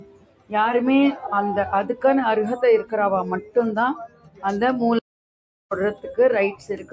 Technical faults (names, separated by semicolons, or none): noise suppressor applied to music or sounds; sound cut by the noise suppressor; audio dropout to silence